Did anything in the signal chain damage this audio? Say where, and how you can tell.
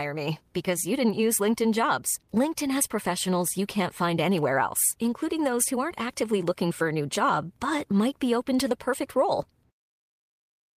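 No, nothing damaged this audio.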